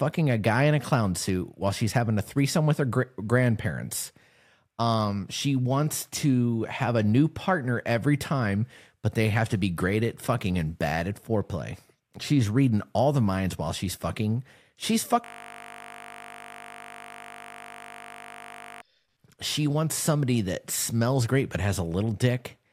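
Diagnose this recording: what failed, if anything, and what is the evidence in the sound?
A system hang loop at the driver or buffer stage: the computer or audio driver stalled while the sound hardware kept replaying the same ring buffer. From 15.24 s to 18.82 s the speech stops and one 20 ms slice repeats roughly 180 times. Because each repeat is so short, the loop comes through as a steady, pitched buzz at 50 Hz rather than a stutter, lasting about 3.6 seconds before normal audio resumes.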